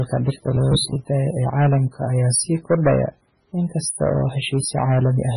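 Hard clipping runs through the whole clip. The speech was driven about 8 dB past what one stage could pass, so the loudest moments, roughly 2 percent of the signal, have their peaks sliced flat. Those squared-off tops add harmonics high above the voice, heard as crackle and grit whenever the speech gets loud. Because the overload is only on peaks, the distortion follows the louder syllables and the quieter passages are spared.

MP3 compression also spans the clip, and the damage is heavy. Nothing is left above 10.5 kHz, so the top of the spectrum is missing and the speech sounds dull and closed-in. The swirly, watery texture is likely the work of an encoder short of bits, which fits a very low bitrate around 16 kbps. Weak frequency lines are dropped and flicker frame to frame, smearing consonant attacks into a warbling haze.

Robotic sound from repeated short buffers appears from 0.34 to 0.97 s. 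A rigid buzz at 66.8 Hz sets in, and the speech loses its natural flow. The likely cause is audio arriving too late, so the software fills the gaps by replaying roughly 15 ms of sound again and again, which fits a buffer of that length. About half the material in that stretch is repetition, so real speech is skipped and the voice there turns metallic and mechanical.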